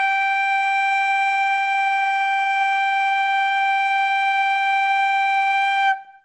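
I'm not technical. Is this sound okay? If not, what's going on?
No. The whole music clip sounds dull and swirly, with nothing above 8.3 kHz, so that's likely heavy MP3 compression squeezing it too hard.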